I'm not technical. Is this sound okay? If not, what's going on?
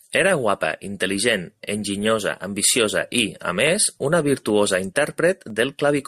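No, there are three quick clicks, at 2.70 s (just before "i a"), 3.67 s (right after "i a") and 5.50 s. Each is likely dropped samples: a tiny sliver of the audio, a fraction of a millisecond, went missing, so the sound jumps and snaps.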